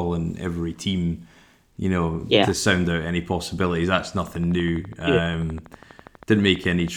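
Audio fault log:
4.19–6.89 s, train of clicks: a steady ticking runs over the speech at roughly 12 clicks a second, evenly spaced, around thirty in all, peaking about level with the voice. Same-shaped pulses this regular likely come from nearby equipment interference.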